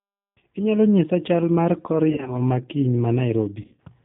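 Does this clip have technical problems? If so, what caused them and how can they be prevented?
Yes. The whole clip carries G.729 codec damage: the band stops near 4 kHz and the speech sounds rough and synthetic, pointing to an 8 kbit/s codec. Prevent it by negotiating a wideband codec.

VoIP packet loss concealed by the speech codec occurs at 2.10–2.36 s and 3.62–3.80 s. The decoder filled about 100 ms and 120 ms of lost audio, in scattered gaps of up to 40 ms and 60 ms, with fading extrapolation of the last pitch and filter. Prevent it with a better network path, QoS prioritisation, or forward error correction.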